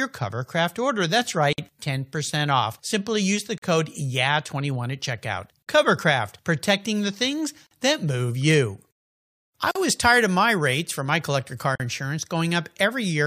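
Gaps at joins of encoded pieces appear at 1.53, 3.58, 5.62, 7.67, 9.71 and 11.75 s, every 2.0 s. The first gap lasts 53 ms and the others 43 ms each. Each two-second piece was encoded separately and joined untrimmed, so encoder start delay and final-frame padding leave a brief, smeared dropout before the sound resumes where it stopped.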